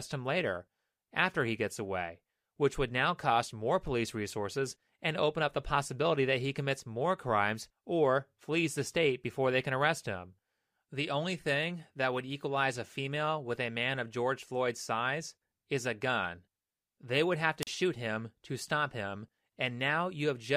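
Right after "would have", around 17.61 to 17.67 s, there's a wireless microphone squelch dropout: the radio link fades, hiss briefly swells, then the receiver's squelch mutes the output for about 40 ms before the speech comes back on "shoot him to stop".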